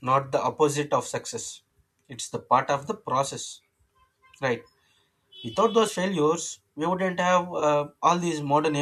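Two brief AAC frame losses with concealment show up in this speech, at 5.87 s and again from 7.60 to 7.63 s. Each fits dropped 10 ms frames of a likely low-delay AAC stream, which the decoder patched from the previous spectrum, leaving a quick smeared, noisy blip.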